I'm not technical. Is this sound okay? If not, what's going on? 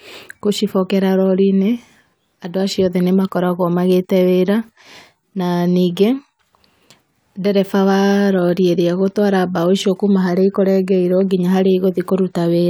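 Yes, nothing in this speech recording stands out as a technical fault.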